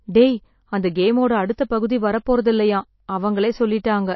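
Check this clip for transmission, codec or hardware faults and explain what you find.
One codec fault runs through the whole clip. The speech carries the damage of MP3 compression, plainly audible from start to finish. Nothing is present above 5.8 kHz, so the treble stops at a hard ceiling. The likely cause is an MP3 encoder starved of bits, which fits a low bitrate near 27 kbps. Short of bits, the encoder dropped the top band and zeroed weak frequency lines. Those lines flicker between frames. The result sounds dull, watery and swirly, with smeared onsets.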